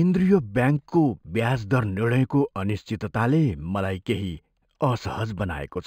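Throughout the speech there is imaging from linear upsampling. The band stops near 5.5 kHz, which fits an 11 kHz source raised to 44.1 kHz by straight-line interpolation. Mirrored copies between 5.5 and 11 kHz, roughly 35 dB down, add a faint metallic shimmer to sibilants.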